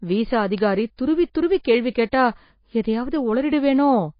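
Across the whole speech recording the treble stops at 5.1 kHz, and the codec damage is plainly audible: a watery, swirling texture where weak spectral components drop in and out between frames. The cause is likely MP3 compression at a low bitrate, which fits an encode of about 24 kbps. The encoder, short of bits, discards quieter frequency lines and applies a fixed low-pass cutoff, and both effects remain for the full length.

At 0.58 s there is a single sharp tick, a bit error spike lasting one sample. A flipped bit pushed one sample value away by a power of two before it returned, producing a broadband click that is unrelated to the underlying signal.

At 2.11 s an attack is preceded by pre-echo, a short smear of hiss about 16 ms long. The transform block containing the onset spread quantisation noise sized for the loud part back into the quiet lead-in, and that softens the attack.

Two more one-sample bit error spikes follow at 2.86 s and 3.77 s. 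Each is an isolated broadband tick with the same single-sample mechanism as the one at 0.58 s.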